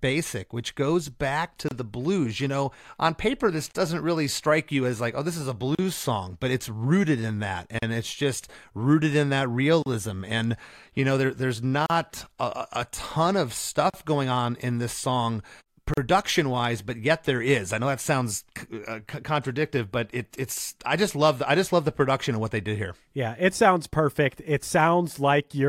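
Gaps at joins of encoded pieces fall at 1.68, 3.71, 5.75, 7.79, 9.82, 11.86, 13.90 and 15.94 s, one every 2.0 s. Each 2-second segment was encoded separately and butted together untrimmed, so encoder delay and end padding leave a brief silence. The first gap is 27.8 ms and the rest 37.6 ms, each a sharp dropout with softened edges, such as between "oh this is a" and "song but it's rooted".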